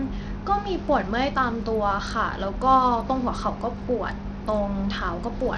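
Bluetooth SBC compression, throughout the speech, is the likely cause of the plainly audible damage. The bands above 11.5 kHz get no bits and are gone, and the coarsely quantised remainder carries gritty noise and aliasing, which fits a starved bit pool around 80 kbps.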